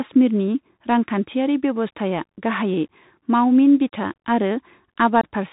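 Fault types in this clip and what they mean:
Bluetooth CVSD headset codec: the speech is squeezed into a narrowband one-bit delta stream at 64 kbps, so nothing above 4 kHz survives, with gritty hiss and scratchy s sounds throughout.
Unconcealed Bluetooth headset packet loss: several packets of speech went missing near the end, around 5.21 to 5.24 s, leaving an abrupt gap of about 22 ms.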